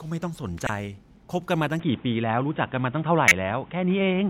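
At 0.66 to 0.69 s there's a short, fairly loud chirp where a corrupt frame got decoded. A couple of damaged compressed frames went through the decoder anyway, so misread data threw energy into the wrong frequencies for that instant.

From 1.8 s to the end the speech goes dull and boxy with no gap at the change. Nothing comes through above 3.8 kHz, the level shifts by a few dB, and a new noise floor appears well below the speech. The input most likely switched to a poorer device, such as another microphone or a headset in call mode.

At 3.28 to 3.32 s a second corrupt frame decoded gives another, louder burst, lasting about one frame.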